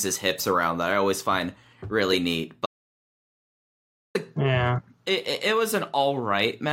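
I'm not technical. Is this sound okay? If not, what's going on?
No. The input was likely lost for a moment, an audio dropout to silence: from 2.66 to 4.15 seconds the speech cuts to dead silence, and about 1.5 seconds is missing.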